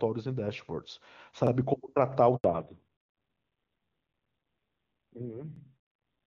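At 1.47 s, overlapping chunks begin: each 2-second processing chunk starts about 48 ms before the previous one ended, so that slice plays twice and causes a brief stutter. At 2.36 s, a handover gap occurs as the call switches networks and no speech frames arrive, so the sound cuts to silence for 80 ms. At 2.44 s, the call falls back to narrowband. The codec drops from the clear, wideband HD Voice sound, which points to AMR-WB at about 23.85 kbit/s, to what sounds like low-rate AMR-NB around 5.9 kbit/s. Nothing above 4 kHz remains, and the sound turns dull and rough through the end. The overlapping-chunk stutter returns at the same 2-second spacing, at 3.52 s and 5.56 s, each repeating about 48 ms.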